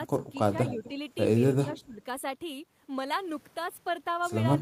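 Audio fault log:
0.17–0.24 s, 0.41–0.54 s, 0.72–0.97 s and 1.64–2.01 s, speech suppressed in double talk: with both ends talking at once, the echo canceller likely couldn't tell this talker from loudspeaker echo and ducked everything. The speech dips by up to about 15 dB, most deeply in the second and last dips.
0.66–0.90 s and 1.71–1.80 s, echo leak: the far end's echo canceller likely failed to remove all of its loudspeaker pickup and sent the remainder back. A faint copy of the speech arrives 247 ms late, roughly 15 to 20 dB below the direct sound.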